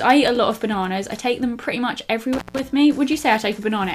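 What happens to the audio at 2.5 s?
At 2.5 s the audio is inside an intermittent contact fault spanning 2.33 to 2.60 s: a loose plug or cable connection briefly opens, breaking the signal path for about 159 ms. The sound drops out abruptly, with crackle where the contact breaks and remakes and faint hiss in the gap. On a waveform this shows as a near-flat stretch bounded by sharp spikes; a spectrogram shows a dark band framed by vertical broadband streaks.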